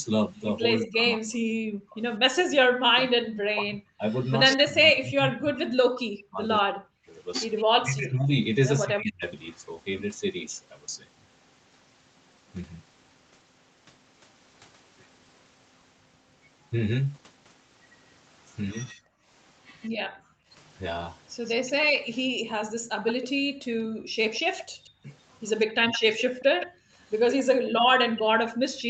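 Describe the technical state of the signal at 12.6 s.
At 12.6 s the speech is intact, with no dropout, click, distortion or other fault, just the normal band-limited sound of a call path with nothing above about 8 kHz.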